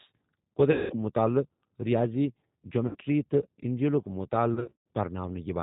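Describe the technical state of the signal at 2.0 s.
At 2.0 s the speech carries G.729 codec damage, present across the whole clip rather than at this moment alone. The codec rebuilds speech from a vocal-tract filter, a pitch predictor and a few pulses per 10 ms frame, which fits an 8 kbit/s G.729A stream, so the speech sounds plainly rough and synthetic. A spectrogram shows a hard ceiling with nothing above 4 kHz.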